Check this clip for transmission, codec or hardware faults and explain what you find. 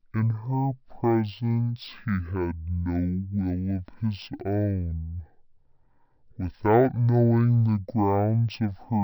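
One fault runs through the whole speech clip: stereo read as mono. The decoder has taken interleaved left and right samples and played them consecutively as a single channel, so every stereo frame yields two mono samples. The effect is exactly half speed, 0.5x, with everything shifted down 12 semitones, a full octave. The speech sounds slow, heavy and unnaturally deep from start to finish, with stretched syllables.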